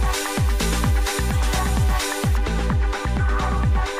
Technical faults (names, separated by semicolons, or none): de-emphasis applied wrongly